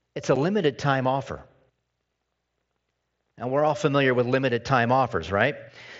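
It's a speech clip over a Bluetooth mSBC headset link with one unconcealed Bluetooth headset packet loss at 0.36 s, between "it's a" and "limited time offer": a 7.5 ms hole with abrupt edges, which fits a single lost frame.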